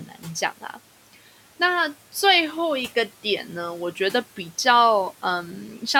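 The noise suppressor misjudged the opening of the speech, between 0.07 and 0.25 s, and treated part of it as noise, so it turned that sound down along with the background, by about 11 dB at its deepest. Around a tenth of a second in total is affected, and the start of the speech there sounds swallowed and faint rather than cleanly begun. The room noise, about 23 dB below the speech, is part of the recording itself.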